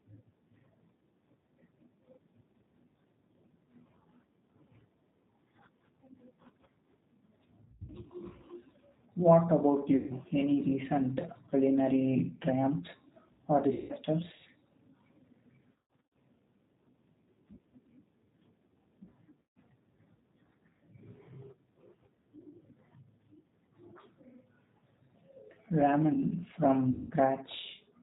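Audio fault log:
Throughout: G.729 codec. The speech is squeezed into about 8 kbit/s and rebuilt from a vocal tract filter plus a few pulses per frame. Nothing above 4 kHz survives, so it sounds dull, a bit rough and plainly synthetic.
7.66–7.90 s, 9.96–10.12 s, 13.73–13.93 s, 15.73–16.17 s, 19.42–19.59 s, 26.91–27.12 s: VoIP packet loss concealed by the speech codec. About 130 to 280 ms of audio goes missing each time. The decoder fills the gaps by stretching its last pitch and filter into a buzzy tone or coloured noise that fades, and the speech stays weak for a moment afterward. The first and fourth events are scattered bursts, with runs up to 40 and 80 ms. The third comes right after "recent culinary triumphs or".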